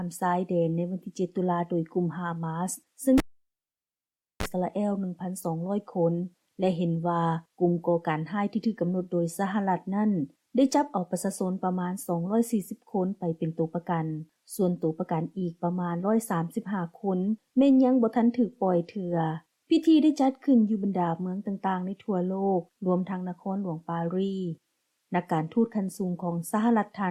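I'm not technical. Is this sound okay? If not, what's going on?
No. At 3.18 s there is a cable pulled and plugged in: a live lead comes out with a pop, leaving about 1.2 seconds of near silence. As it goes back in, a 31 ms burst of 50 Hz mains buzz precedes another pop at 4.46 s.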